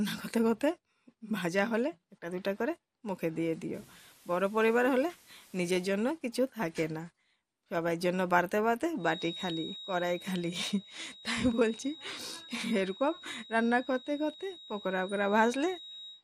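Throughout the audio, the dull, gurgling texture is likely MP2 compression: MPEG Layer II coding divides the spectrum into 32 equal sub-bands and shares out a limited bit budget, so upper bands are dropped entirely and the remaining ones are quantised coarsely. Here the damage is plainly audible. The top end sounds muffled, high bands flicker in and out, and a granular distortion clings to what survives, a character which fits a low bitrate around 80 kbps.

From 3.74 to 5.89 s the signal is carried with low bit depth with dither. Only a handful of bits are used, which points to roughly 8, and dither is added before rounding so the quantisation error becomes random rather than correlated with the signal. The result is a steady, even hiss sitting about 30 dB below the sound, with no harsh distortion, that appears and vanishes at those boundaries.

From 8.96 s to the end at 16.23 s a feedback whistle is present, with the loudspeaker-to-microphone path likely hovering just at the edge of instability. 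A single tone at 3.8 kHz keeps ringing without building into a howl. It is heard as a thin, persistent whistle roughly 20 dB under the main sound, swelling and fading slowly in level as the loop gain drifts.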